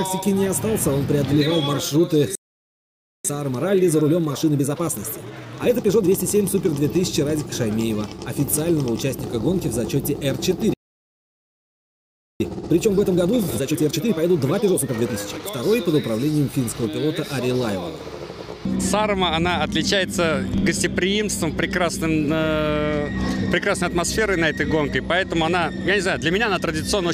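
At 2.35 s the sound cuts out for about 0.89 s, a playback stall. The player likely ran dry of data or was blocked. From 3.25 to 6.25 s comes time-compressed catch-up at 1.25 times speed. Small pieces are cut and cross-faded to clear the backlog, so the audio hurries at normal pitch. A second stall follows at 10.74 s, silent for about 1.66 s, likely from the same starvation. Catch-up then runs from 12.40 to 15.40 s at 1.5 times speed, noticeably more rushed.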